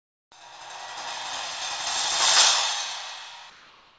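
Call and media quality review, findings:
Comfort noise in place of the background, 0.00 to 0.32 s. Real background swapped for steady, featureless noise, about 24 dB lower. Background sits about 42 dB below the loud parts. Likely discontinuous transmission: sender went silent, receiver synthesised filler noise.

Sound dropped by the voice detector, 3.50 to 3.98 s. About 0.25 s of sound lost, then steady noise to the end, 0.49 s in all. Detector likely judged the sound as background and stopped sending. Comfort noise filled the gap.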